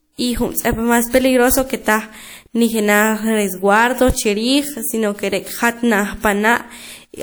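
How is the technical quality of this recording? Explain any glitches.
One coding fault is audible: pre-echo at 0.53 to 0.57 s. A transform codec has spread the quantisation noise meant for a sharp attack across the whole block, so about 42 ms of hiss leaks in ahead of the onset, leaving that attack sounding soft and smeared.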